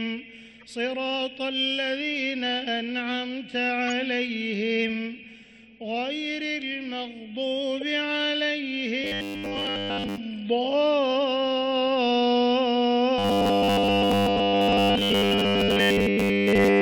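Three short blips break through early on, at 0.60 to 0.63 s, at about 3.88 s, and at 7.77 to 7.83 s. Each is a corrupt frame decoded. Flipped bits in a compressed frame reached the decoder, which played it anyway, so gains and spectral codes got misread and energy landed at the wrong frequencies for roughly a couple of frames each time. Later the audio goes rigid and metallic from 9.04 to 10.18 s and again from 13.19 s to the very end at 16.8 s. It's a steady 100 Hz buzz stamped over the sound, which still loosely tracks the original's shape. That's robotic sound from repeated short buffers, likely from new audio arriving too slowly while playback kept looping the last chunk. A 100 Hz buzz fits a buffer of about 10 ms, and the repeats seem to have replaced most of the real audio in those stretches, something like two thirds or more.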